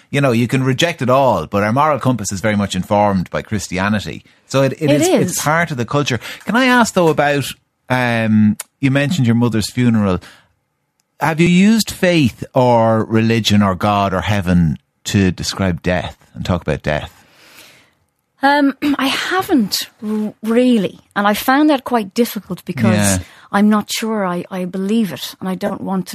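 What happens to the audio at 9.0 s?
Nothing goes wrong at 9.0 s: the speech there is intact, with no dropout, click or other fault at that moment.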